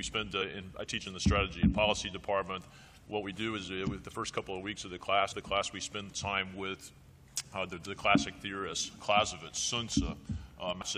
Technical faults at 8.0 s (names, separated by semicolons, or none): none